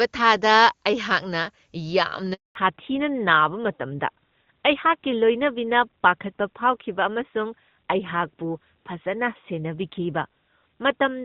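At 2.33 s the speech cuts out for a handover gap of 220 ms, lasting until 2.55 s. No frames arrived while the call switched networks, so the sound fades within milliseconds and stays silent. A waveform shows a flat stretch, and a spectrogram shows a blank vertical band.

From 2.55 s to the end comes a fallback to narrowband. The voice turns duller and rougher, which points to an AMR narrowband codec replacing the wideband one. On a spectrogram, all energy above 4 kHz stops abruptly along a sharp horizontal edge.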